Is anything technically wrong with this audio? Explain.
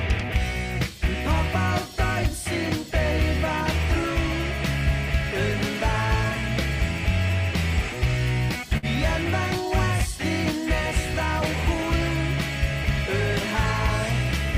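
Yes. From 8.77 to 8.86 s there is a short stall from a late packet. The jitter buffer ran empty, so the receiver held the last sound for 55 ms, heard as a slight buzz or dip, then resumed from the same place. Unlike a lost packet, nothing is skipped; everything after simply arrives 55 ms later.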